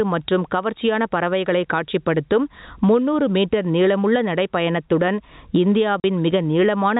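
Gain pumping runs through the whole speech clip, likely from a fast compressor or limiter behind an overdriven input, so the gain ducks roughly 15 dB under loud syllables. At 6.0 s, packet loss filled with silence cuts a 40 ms hole with hard edges, which fits two lost 20 ms packets, against the band-limited G.711 telephone sound.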